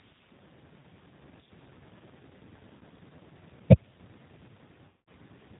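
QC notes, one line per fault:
Throughout: G.729 codec. The speech is rebuilt from a vocal tract filter, a pitch predictor and a few pulses per 10 ms frame, so it is plainly rough and slightly synthetic, with nothing above 4 kHz. That sparse-pulse texture, rather than the smeared, swirly artefacts of a transform codec, fits an 8 kbit/s G.729A stream.
0.80–0.84 s and 2.78–2.81 s: VoIP packet loss concealed by the speech codec. About 30 ms of audio is missing each time, which fits a single lost packet. The decoder repeats its last pitch and filter at falling gain, giving a brief stretched, fading sound rather than a click or a clean gap of silence.
4.89–5.09 s: VoIP packet loss concealed by the speech codec. This is a longer loss of about 180 ms, pointing to several consecutive packets. The extrapolated sound is stretched and fades, and the speech stays weak and distorted just after, because each frame is built on the damaged one before it.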